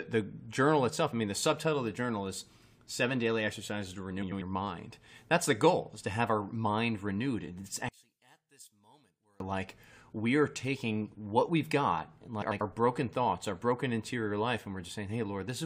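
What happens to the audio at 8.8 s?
A likely case of one channel inverted, from 7.89 to 9.40 s: the centred speech cancels when summed to mono, dropping about 30 dB.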